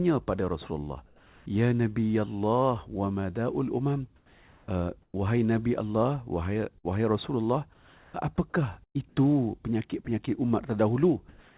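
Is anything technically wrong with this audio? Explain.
Yes, the audio has three kinds of fault. The whole clip sits in a band that ends at 4 kHz, which fits a G.711 call path at 64 kbps.

Comfort noise in place of the background, at 1.06 to 1.46 s, 4.16 to 5.14 s (just after "wa mada'ul umam"), 7.74 to 8.14 s, 8.84 to 9.17 s and 11.29 to 11.57 s. In each pause the real room tone gives way to a steady, featureless hiss. The likely cause is that the sender stopped transmitting during silence and the receiver synthesised noise to fill the gap. The background runs about 28 to 31 dB below the loud parts, and the fill is about 2 dB quieter at 1.06 s and 7.74 s. On a spectrogram these stretches look like smooth, uniform grey with none of the texture of the surrounding background.

Burst of packet loss, at 6.78 to 6.86 s and 8.84 to 8.97 s. Audio went missing, about 60 ms in the first case and 120 ms in the second. 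The receiver stretched the last sound it had and faded it out, so each gap is heard as a brief held buzz or fading hiss, and the audio then jumps ahead. In the second gap about 100 ms falls to near silence. On a waveform this shows as an envelope that decays and then restarts abruptly, and on a spectrogram as smeared, repeated harmonics.

Sound dropped by the voice detector, at 10.05 to 10.07 s. The likely cause is that the detector treated a quiet fragment as background and sent nothing. About 10 ms of real sound is lost and replaced by noise within a 20 ms window. This is heard as the sound briefly giving way to steady noise, and on a spectrogram as a thin vertical seam of flat noise.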